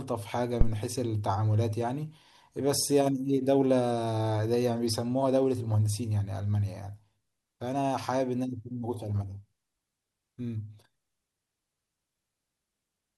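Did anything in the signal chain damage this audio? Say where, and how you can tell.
Yes: a phantom power thump at the analogue input, 0.61 to 0.76 s, peaking near -8 dBFS and decaying in 33 ms. A supply step through coupling capacitors gives a clean low-frequency transient, unlike a handling bump's rustle.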